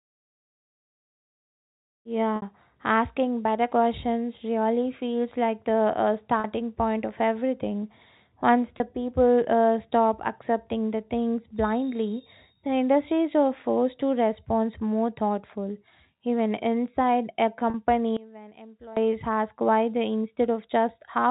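Packet loss with pitch repetition occurs at 2.36 s (about 60 ms), at 6.40 s just before "point of everything" (40 ms), at 8.78 s (20 ms), and at 17.70 s right after "inside a" (40 ms). Each time, a stretch of the stream went missing, and the receiver bridged it by looping the last pitch period, which is heard as a brief held, buzzy tone. The gap lengths fall in steps of 20 ms, which fits 20 ms packets.

One channel inverted affects 18.17 to 18.97 s, just before "ask why they". The level drops by about 20 dB, leaving a faint residue of the speech. This is heard when the stereo pair is folded to mono. The likely cause is reversed polarity on one side, so the shared centre content cancels and only the small difference between the channels remains. Throughout, the speech keeps the narrow band expected of G.711 telephone coding.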